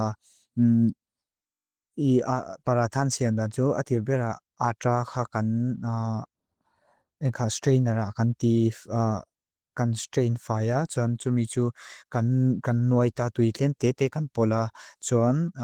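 Opus voice compression throughout, consistent with about 16 kbps: coarsely coded SILK excitation leaves the speech plainly hoarse and slightly robotic, with highs carried by a thin CELT layer.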